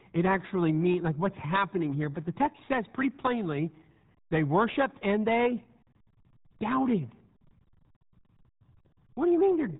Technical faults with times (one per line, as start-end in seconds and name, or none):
0.00-9.79 RealAudio 14.4 codec